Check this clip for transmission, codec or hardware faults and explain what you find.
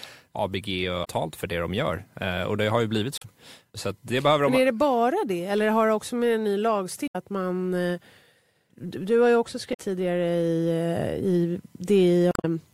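The clip has one kind of fault: damaged data in a compressed stream. It occurs five times, at 1.01–1.08 s, 3.18–3.25 s, 7.05–7.16 s, 9.70–9.79 s and 12.29–12.45 s. Each is a brief chirp, squawk, click or short hole in the speech, lasting 70 to 160 ms. Corrupt bytes in the encoded stream make the decoder misread those frames. It loses sync and hunts for the next valid frame header. The garbled output in between is what breaks through.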